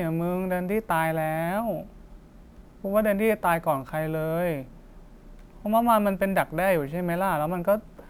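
Throughout, a bright metallic fizz follows the speech level, about 27 dB down: imaging from sample-and-hold upsampling mirrors the spectrum into 12 to 24 kHz, which fits unfiltered 24 kHz-to-48 kHz conversion.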